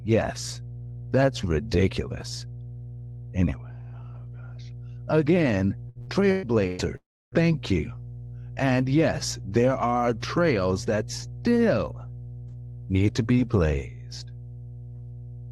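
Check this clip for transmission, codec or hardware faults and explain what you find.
Three faults are audible: a constant mains hum, a burst of repeated packet loss, and a dropout shortly after it. The speech also carries the band limit of a call codec, with nothing above about 12 kHz, which fits Opus at around 48 kbps.

Mains hum runs through the whole clip as a steady 60 Hz tone with low harmonics, at about 15 dB below the speech. A ground loop or a nearby transformer is coupling the power line into the signal, so the tone never changes with the speech.

Repeated packet loss (robotic sound) occurs from 5.89 to 6.81 s. There are four gaps, the longest 117 ms, and concealment covers roughly two-fifths of that span. Each missing piece is filled by extending the previous sound, so the speech turns choppy, with fragments missing.

A long network dropout follows from 6.96 to 7.35 s, which is the likely cause. 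The last sound is stretched into a fading buzz or hiss, then about 0.29 s of near silence follows. Audio resumes afterwards without the lost portion.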